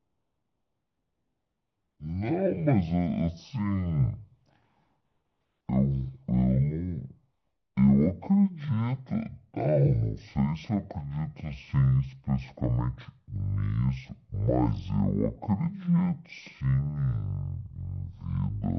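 The speech drags at half speed and sits a full octave low from start to finish, a typical stereo read as mono fault: interleaved left and right samples are played back in sequence as one channel, doubling the length and halving every frequency.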